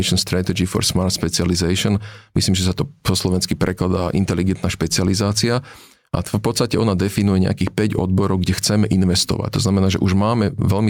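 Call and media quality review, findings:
Gain pumping, whole clip. Level swing around 15 dB. Dynamics squashed, loud and soft passages close in level. Likely cause: input gain set far too high, a fast limiter/compressor clamping on peaks.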